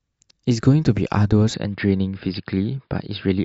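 Speech, where the input was likely switched to a poorer device at 1.54 s; from there to the end, a narrower band passes, dulling the voice, with a faint new background noise at unchanged level and no gap.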